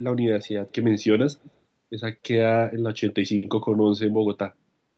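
At 0.69 to 0.74 s, and again at 1.41 to 1.51 s, a faint delayed copy of the speech returns about 200 ms behind the original. This is an echo leak, likely from a far-end loudspeaker whose echo canceller let residual pickup through. The first scrap sits roughly 35 dB down, the second stronger at roughly 25 dB down. Both are brief fragments within audio already band-limited to 8 kHz by the call path.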